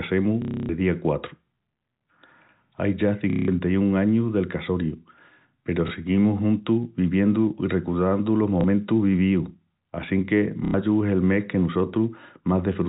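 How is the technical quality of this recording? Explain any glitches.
The recording is marred by packet loss with the last packet repeated, at 0.42–0.69 s, 3.30–3.48 s (just before "añus del"), 5.88 s, 8.61 s (between "viviendu i recordandu los" and "vivíus assinque") and 10.65–10.74 s (before "es el mes que"). Lost packets were filled by replaying the previous one, so the longer gaps stutter robotically, buzzing near 33 Hz, which fits 30 ms packets, while the single repeats at 5.88 s and 8.61 s sound like small blips. The waveform shows identical repeating blocks. The bandwidth stays capped at 4 kHz throughout, as G.711 telephone coding allows.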